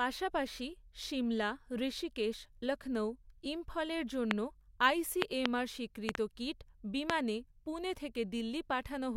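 Right after "সিমলা ঋষিকেশ লক্ষৌ ইম্ফলের" there's a loud pop at 4.31–4.33 s, then double pops at 5.22–5.48 s and 6.09–6.17 s, and a single one at 7.10–7.12 s. They're sharp thumps roughly 20–25 dB above the speech, which carries on underneath. The likely cause is voltage spikes from a plug, switch, static or driver glitch.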